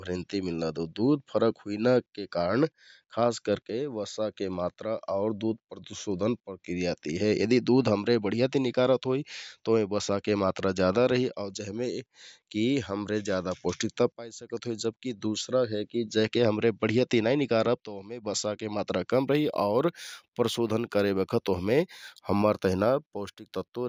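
Speech, with imaging from linear upsampling from 19.11 s, just after "बसाके मात्रा", to the end at 23.89 s. The rate was raised by straight-line interpolation between samples, which suppresses spectral copies poorly, and the band edge is consistent with going from 16 kHz to 48 kHz. The top of the original band sounds dulled, and a mirrored image sits between 8 kHz and 16 kHz, roughly 35 dB below the signal, adding a faint metallic shimmer to sibilants.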